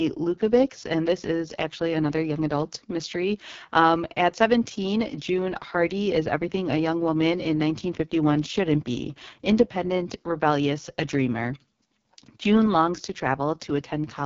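From start to end, the speech carries heavy AMR wideband (HD Voice) codec damage. It sounds rough and raspy, which fits the lowest 6.6 kbit/s mode. The coder models the voice crudely at this rate. Nothing is present above about 7.3 kHz.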